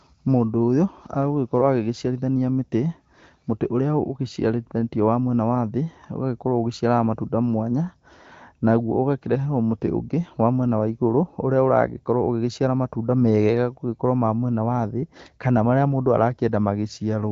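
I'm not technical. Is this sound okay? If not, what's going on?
Yes, nothing in this speech clip stood out as a problem on listening.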